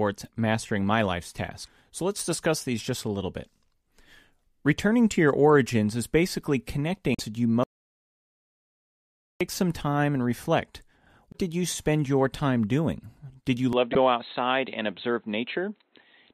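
Speech with four bursts of damaged data in a compressed stream, at 1.63–1.68, 7.12–7.20 (after "your origins is basically"), 11.31–11.35 and 13.92–13.97 s. Each is a short fault where the decoder loses sync. From 7.64 to 9.41 s there is an audio dropout to silence: silence with no room tone, likely from a lost input, and about 1.95 s of speech is gone before "some time and reflect". At 13.73 s the sound abruptly turns dull and stays that way to the end, with nothing above 4.1 kHz. This points to an input switched to a poorer device, likely a narrowband headset profile. A new noise floor appears about 45 dB below the speech, with no gap and no level jump at the switch.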